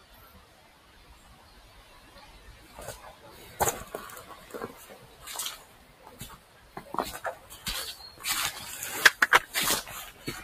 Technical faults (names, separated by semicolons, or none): noise suppressor applied to music or sounds; sound cut by the noise suppressor